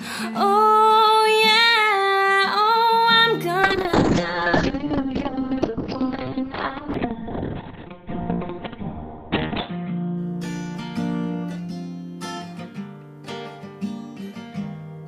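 From 3.64 s to 12.73 s a call bitrate drop starves the encoder, consistent with a fall from about 128 to 7 kbps, and bandwidth narrows from 20 kHz to 4 kHz. At its worst, for about 4.8 s, the sound turns muffled, rough and watery.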